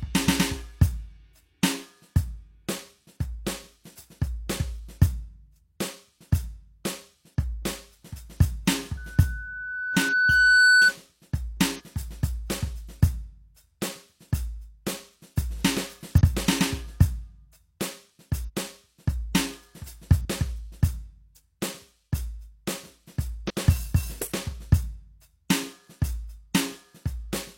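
Music, where a microphone picks up its own loudspeaker from 8.97 to 10.93 s. This loudspeaker feedback squeal swells over about two seconds into a 1.5 kHz tone about 10 dB above the music. Compressed frames are skipped at 10.08, 11.75, 16.16, 18.44, 20.21 and 23.46 s, so the music jumps ahead by about 0.1 to 0.3 s each time, which fits 46 ms frames.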